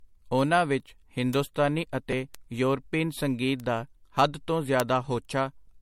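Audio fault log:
throughout: generation loss. The speech sounds swirly, hollow and smeared with softened attacks and nothing above 16.7 kHz, likely from several MP3 re-encodes, fitting 64 kbit/s, each adding fresh quantisation noise.
1.33, 2.35, 3.60, 4.8 s: bit error spike. Single sharp broadband ticks, unrelated to the speech, after "ਉਹਨਾਂ ਵਿਚ" and "ਸੰਗੀਤ ਦਾ ਹੱਦ ਤੋਂ": a flipped bit briefly throws one or two samples far off.
4.15–4.17 s: repeated buffer. A brief buzzy click between "ਯੋਰਪੀਨ ਸੰਗੀਤ ਦਾ" and "ਹੱਦ ਤੋਂ": a 5 ms piece replays three extra times with hard joins, fitting a tiny buffer, losing about 15 ms.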